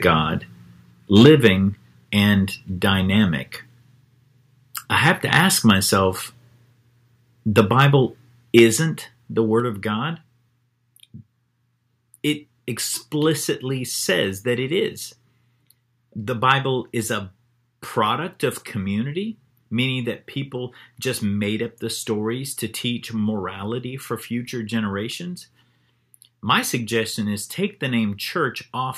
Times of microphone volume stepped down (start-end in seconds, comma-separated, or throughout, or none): 1.26, 8.59, 9.60, 16.83